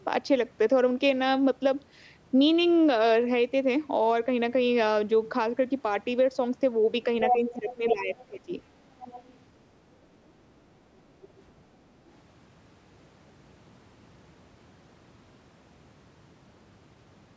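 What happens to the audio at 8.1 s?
Speech suppressed in double talk runs from 7.33 to 8.54 s: the voice drops by up to roughly 15 dB, likely because the echo canceller mistook simultaneous talk for loudspeaker echo. Within it, from 8.18 to 8.25 s, the other side's voice leaks through faintly, about 30 dB below the speech, likely residual echo left in the microphone signal.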